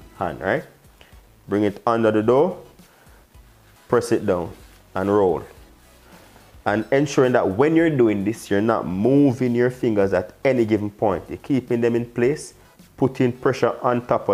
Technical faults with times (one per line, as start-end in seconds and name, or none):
none